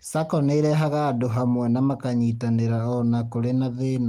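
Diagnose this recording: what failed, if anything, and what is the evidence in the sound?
Nothing in this speech recording points to a failure at any stage, from wiring and conversion through to playback. The Opus voice compression is working as intended: the band extends to about 20.1 kHz, which fits hybrid mode at full bandwidth, and the only coding traces are light.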